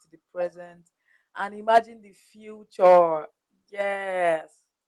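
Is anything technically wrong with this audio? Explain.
Yes. The input level is unstable. After "the present and", from 1.74 to 1.78 s, peaks hit the converter ceiling, likely because the microphone gain was set too high. The waveform tops are cut flat, about 3 dB over, on roughly a tenth of samples, adding a harsh crackle. It happens again from 2.84 to 2.99 s.

At 1.78 s, right after that distorted peak, the input volume is likely pulled down in one step by the call software's gain control. The sound and background drop together by about 3 dB. A second step down of about 4 dB follows at 3.81 s.

At 2.79 s the microphone volume is stepped up by about 6 dB in one move, the software judging the input too quiet. Everything jumps louder together.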